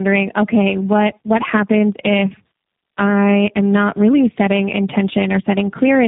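Speech runs through the whole clip with tandem speech coding from start to finish. It sounds rough, dull and warbly. Nothing is left above about 3.8 kHz. The sound fits a call passed through three speech codecs in a row, likely low-rate coders such as iLBC and G.729A. Each was decoded and coded again at a network border, so every coder worked on the previous coder's losses, and the damage built up.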